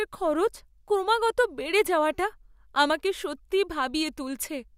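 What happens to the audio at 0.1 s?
Nothing goes wrong at 0.1 s: the speech plays through that moment intact, with no dropout, click, distortion or other fault.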